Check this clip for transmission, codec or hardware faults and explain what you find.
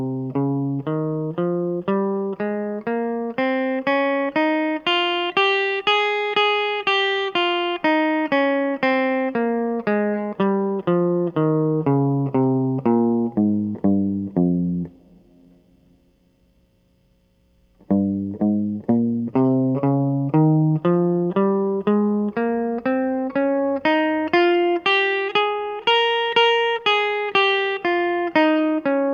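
Listening to the music here, nothing stood out that would point to a transmission, codec or hardware problem.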